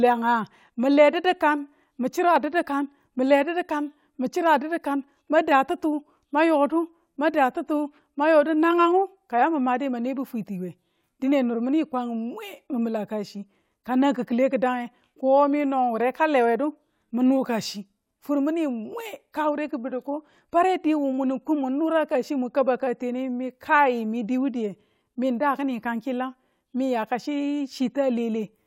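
Nothing goes wrong anywhere in this speech recording; there's no technical fault to point to at any moment.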